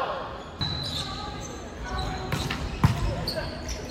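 No technical faults can be heard anywhere in this audio.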